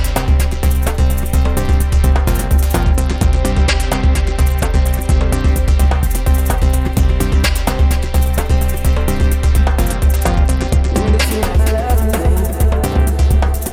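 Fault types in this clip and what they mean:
Bluetooth SBC bit pool drop: with the wireless link struggling, the sending device cut the SBC encoder's bit budget to keep audio moving, so the highest sub-bands got almost nothing and the remaining ones were quantised coarsely. The sound goes dull and loses its top end while a gritty, grainy noise rises, from 2.83 to 5.51 s and again from 9.85 to 11.22 s, consistent with a fall from a bit pool of 28 to about 11, near 90 kbps.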